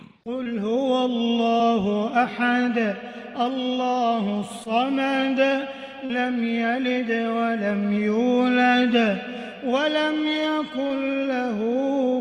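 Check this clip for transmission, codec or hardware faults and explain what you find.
Short concealed packet loss occurs five times, at 0.43, 1.57, 4.64, 6.05 (40 ms) and 10.87 s (about 20 ms each). Missing audio was synthesised from the preceding sound, giving a brief smear or wobble rather than a silent dropout.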